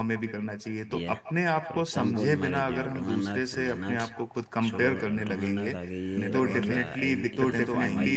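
From the first syllable to the last, the speech carries an echo with no canceller: a copy of the talker returns roughly 150 ms later, about 17 dB down, thinner, as if played from a loudspeaker at the far end and picked up again without echo cancellation removing it. On a spectrogram each burst of speech has a faint, smeared shadow trailing a little to its right, and the waveform shows a low tail after every phrase.

At 6.17 s a doubled audio track begins and runs to the end of the clip. A second full-band copy of the speech, roughly as loud as the original, sits about a second behind it, so two streams of the same speech overlap. The copy has no room colour or decay, and it cuts in abruptly. The likely cause is a second, slower capture path mixed in alongside the first. The spectrogram shows the energy pattern repeated, shifted by about a second, all of it below the 8 kHz ceiling of the call path.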